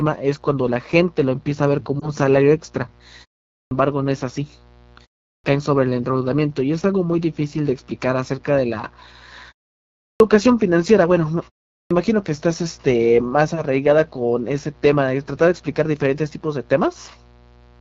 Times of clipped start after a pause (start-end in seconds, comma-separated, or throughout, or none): 3.57-3.71, 5.30-5.44, 10.08-10.20, 11.77-11.91